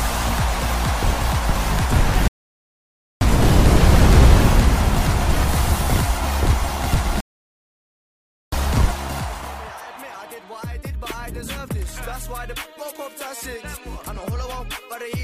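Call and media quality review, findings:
Rebuffering stall at 2.28–3.21 s, about 0.93 s of silence; sound resumes at the exact point it halted. Player buffer underrun, playback paused until more data downloaded.

Rebuffering stall at 7.20–8.52 s, about 1.32 s of silence, same behaviour. Unlike a packet-loss dropout, no audio is skipped; the gap inserts time, so the clip runs long.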